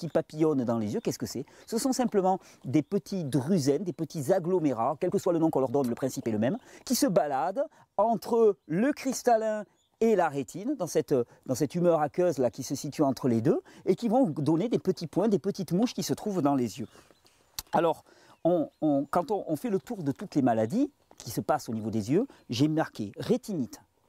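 From 4.99 to 7.07 s there is a time-stretched section. The sound suddenly runs about 1.43 times faster, yet its pitch stays put. It comes across rushed. Software likely squeezed this stretch to fit a length, dropping short pieces to hold the pitch.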